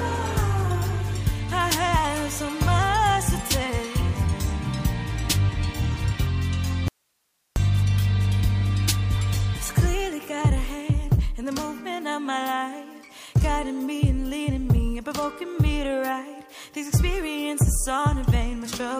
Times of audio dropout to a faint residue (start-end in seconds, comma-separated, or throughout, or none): 6.88-7.56